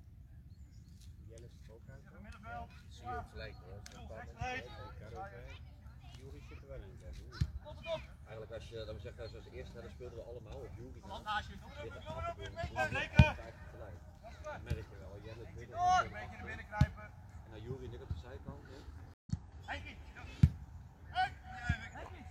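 At 19.14 s a stream reconnect restarted the decoder, leaving 0.13 s of silence, after which the sound resumes roughly a tenth of a second further on.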